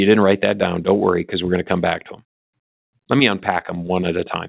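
No faults can be heard in the speech, which comes over a call connection with nothing above 4 kHz, a narrow band that fits G.711 mu-law coding at 64 kbps.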